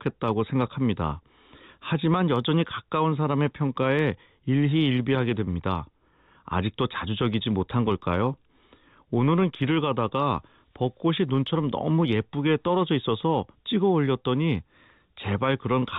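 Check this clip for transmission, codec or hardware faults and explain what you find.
No faults found here.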